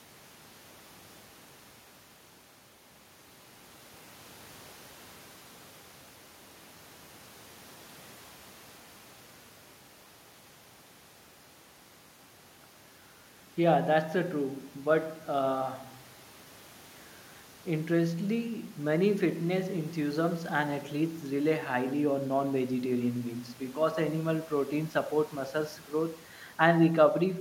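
Listening to the speech from beginning to end, nothing stood out as a technical fault.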